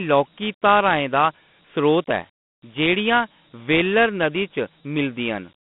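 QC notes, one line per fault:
Throughout, Dialogic VOX ADPCM: the speech sits in a narrow line band of roughly 150 Hz to 3.5 kHz with nothing above 3.8 kHz, and a gritty hiss rides along with it. Coarse 4-bit step-size coding can't track the waveform cleanly, which fits 32 kbps OKI ADPCM.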